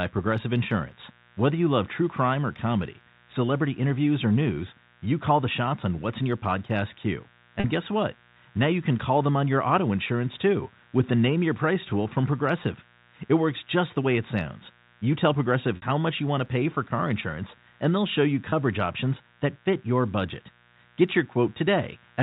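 Speech heard through a telephone-band G.711 path, where the band stops at 4 kHz. Interference from the 60 Hz mains injects sharp switching spikes twice per cycle, producing mains buzz: a steady, raspy hum with harmonics, sitting well below the speech throughout. Packet loss with pitch repetition occurs at 7.6 s (40 ms), 15.76 s (60 ms) and 18.5 s (20 ms). The receiver repeats the last pitch period across each gap, so the two shorter ones sound like a briefly held, buzzy note, while the 60 ms gap fades into silence before the speech returns with a short cross-fade, and the gap lengths fit lost packets of 20 ms each.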